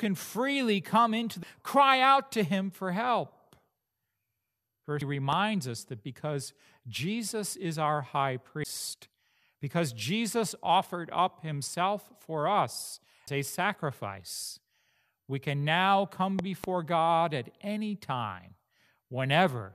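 Speech, with three CD skips at 5.01 s, 8.64 s after "is our high", and 13.27 s between "for us" and "a sacrifice". Each is a tick and a mute of a few to about 15 ms, then the audio resumes from another place on the disc's spiral rather than where it stopped, as a plain dropout would. Loud pops occur at 5.33 s (one, about 10 dB above the speech) and 16.39 to 16.66 s after "we can now come" (two, about 15 dB). The speech carries on beneath them without a gap, and they were likely caused by a voltage spike from a plug, switch or static.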